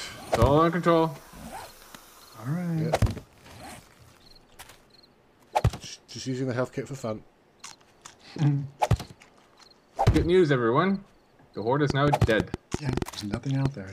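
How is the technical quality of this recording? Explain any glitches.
The recording carries one clear glitch near the end. From 11.90 to 13.67 s a train of clicks runs over the sound: about ten sharp ticks at roughly 6.3 per second, spaced unevenly, each standing well above the surrounding audio, around 15 dB louder, and audible in gaps too. Because the clicks share much the same shape, the likely cause is a repeated electrical pulse, such as interference from nearby equipment or a faulty connection or power supply.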